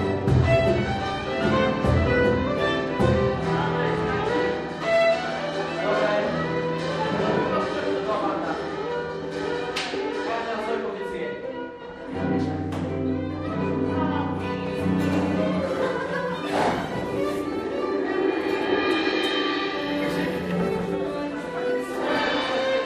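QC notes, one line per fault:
0.0–14.4 s, de-emphasis applied wrongly: for this stretch the top end just sags, a smooth downward slope that leaves things about 10 dB lower at 10 kHz than at 1 kHz, so the whole sound comes across dull and muffled, like it's behind a blanket. That's a treble cut meant to undo pre-emphasis being put on material that never had any, or being applied a second time. Past 14.4 s the brightness comes back.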